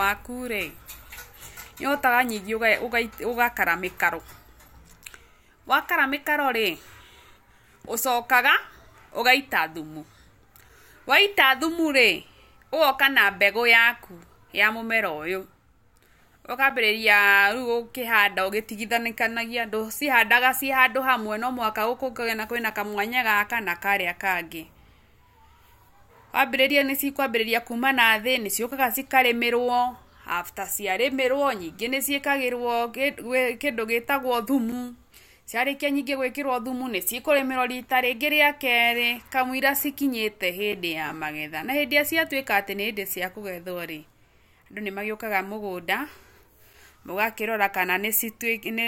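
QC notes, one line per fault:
4.68, 10.69, 16.70, 34.72, 40.72 and 46.73 s: gap between chunks. The speech drops out for about 7 ms at each point. The joins fall 6 s or a multiple of 6 s apart, so the audio was likely cut into 6 s chunks, with a short stretch of silence added at each join. No speech is missing, but each join is heard as a brief hole in the speech.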